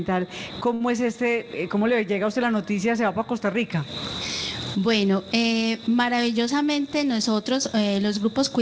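At 0.74 s the audio briefly hangs: a short stall from a late packet. A packet missed its playout time, the jitter buffer ran dry, and the receiver stretched the last sound for about 65 ms until the packet turned up, then resumed from the same point, so nothing is lost. On a spectrogram the partials run flat and unchanging through 0.74–0.82 s. The waveform shows a repeating, slightly decaying cycle where the held sound is extended, and the sound lingers too long.

From 3.72 s to the end the balance turns bright and thin because pre-emphasis was left on. The treble lift follows a 75 µs FM-style curve and reaches about 13 dB at 10 kHz relative to 1 kHz, but the matching de-emphasis was never applied. Sibilance and hiss jump forward. A spectrogram shows the upper band suddenly much darker from 3.72 s, up to the hard ceiling at 8 kHz left by the call codec, which fits G.722 at 64 kbps.

Between 6.41 and 7.43 s a jitter buffer speed-up is audible. 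The buffer had built up more delay than its target, so the receiver repeatedly cut out short pitch-period-length slices, about a tenth of a second in total. That plays this stretch roughly 8% fast with the pitch unchanged, and it feels hurried. The waveform looks slightly compressed in time, and on a spectrogram events sit closer together, with occasional small seams where slices were removed.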